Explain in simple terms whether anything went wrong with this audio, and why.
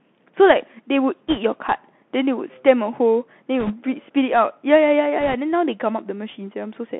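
The Bluetooth CVSD headset codec colours the whole clip: speech is squeezed into a narrow phone-like band, roughly 200 Hz to 3.4 kHz. The codec tracks the waveform only in small up-or-down steps, so sharp sounds turn scratchy and a grainy hiss sits underneath.

Bit errors on a Bluetooth voice link occur at 1.29–1.39 s, 3.60–3.74 s and 5.21–5.34 s. Over those stretches, a few percent of the transmitted bits were flipped. Each flipped bit nudges the sound only slightly, so instead of loud clicks you hear brief rushing, crackly noise.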